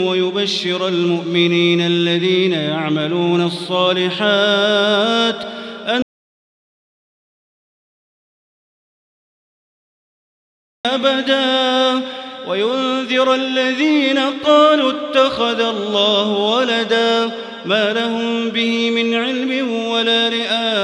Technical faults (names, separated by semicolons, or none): audio dropout to silence